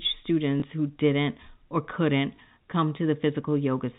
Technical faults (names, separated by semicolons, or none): packet loss with last packet repeated